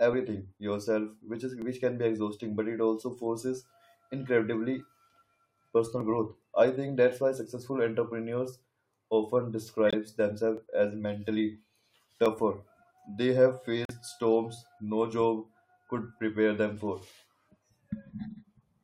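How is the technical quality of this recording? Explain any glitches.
The recording has three kinds of glitch, scattered through the speech.

Dropped samples: single sharp clicks at 1.62 s (just before "which can"), 6.01, 10.57, 12.26 and 16.77 s. Each is likely a loss of well under a millisecond, so the waveform jumps abruptly. Unlike the gaps below, no sound goes missing, only a tick.

Corrupt frame muted: abrupt silences from 9.88 to 9.94 s and from 13.85 to 13.91 s, about 60 ms each. Damaged compressed frames were rejected by the decoder and replaced with silence. The length fits two or three frames, and the timing stays intact, unlike a click.

Corrupt frame decoded: at 17.00 s, a brief glitch lasting roughly one frame. Here the damaged frame was played anyway, so misread data put energy at the wrong frequencies. It is a chirp, squeak, blip or burst of noise rather than a click.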